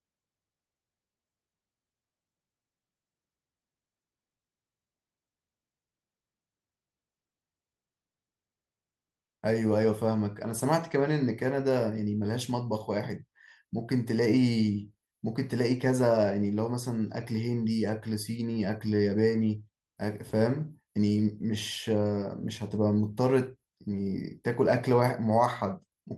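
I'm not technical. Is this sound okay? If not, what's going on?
Yes, nothing stood out as a problem on listening to this speech recording, which came through an ordinary internet call connection.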